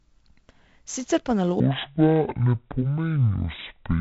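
This speech clip carries a gritty hiss that rides on every loud passage, with roughness on sharp attacks and nothing above about 8 kHz, giving a dull, band-limited tone. That is heavy 4-bit ADPCM compression, consistent with a 64 kbps stream: each sample is coded as a coarse step from a prediction, and the step size cannot keep pace with fast changes. From 1.6 s to the end, the audio suddenly drops about ten semitones and slows to roughly half pace, at 0.513 times normal speed. This section at the wrong speed was likely caused by playback or editing against the wrong clock.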